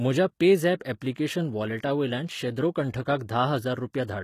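A speech clip with plainly audible codec damage throughout, likely from HE-AAC compression at a low bitrate around 20 kbps. Spectral band replication rebuilds the treble from copied lower bands, so harmonics misalign above the crossover; a spectrogram shows that patched upper band and nothing above 14.9 kHz.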